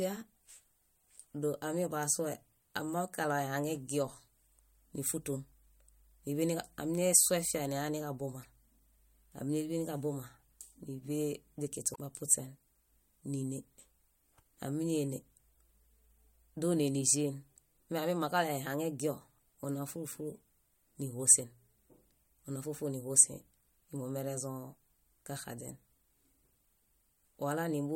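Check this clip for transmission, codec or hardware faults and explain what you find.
Two brief faults are present. At 8.42–8.45 s and 11.92–11.96 s, short glitches break the speech: damaged data in a compressed stream, corrupted bytes making the decoder misread frames and lose sync.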